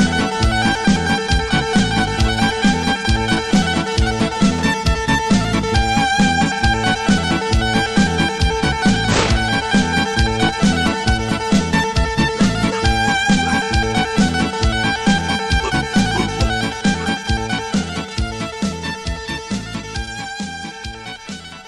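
Nothing in the recording stood out as a technical fault on listening.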